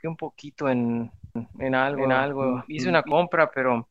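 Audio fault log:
1.36–3.12 s, doubled audio track: likely a second, slower capture path mixing the speech in again, so an equally loud, dry copy trails about 400 ms behind, starting and stopping abruptly.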